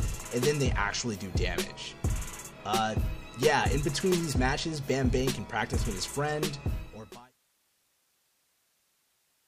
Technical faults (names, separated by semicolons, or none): none